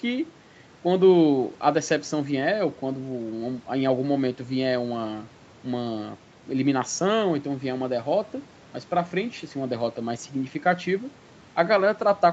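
Nothing stood out on listening to this speech recording; its content tops out around 8 kHz, as expected after a call's microphone processing and codec.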